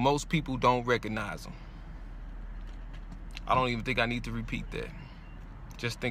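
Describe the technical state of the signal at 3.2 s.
At 3.2 s the signal is intact, with no dropout, distortion, glitch or other fault audible at that point.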